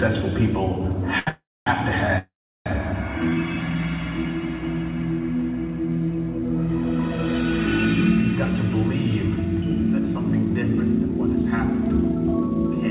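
At 1.19 s the sound is held for 76 ms. This is a short stall from a late packet: the jitter buffer ran empty, so the receiver stretched the last sound until the packet arrived, then carried on with nothing lost.

From 1.29 to 1.67 s, and again from 2.18 to 2.67 s, the sound fades and then goes silent for about 240 ms and 360 ms. These are call audio freezes. They likely come from packets held up in transit and draining the jitter buffer. Playback resumes where it stopped, adding gaps of 378 ms and 474 ms.

From 8.73 to 10.50 s and from 10.93 to 12.76 s the audio runs about 4% fast at unchanged pitch. This is a jitter buffer speed-up: the receiver trimmed short pitch-period pieces to shed excess delay, removing roughly 100 ms and 70 ms. Throughout, the band stops at 4 kHz, which fits a G.711 call codec.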